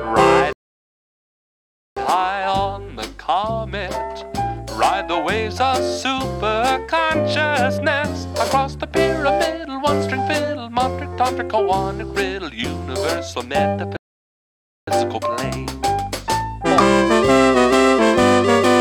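Rebuffering stalls at 0.53–1.97 s and 13.97–14.88 s: playback starved, froze to silence, then resumed exactly where it stopped, adding 1.44 s and 0.91 s without skipping anything, unlike a dropout.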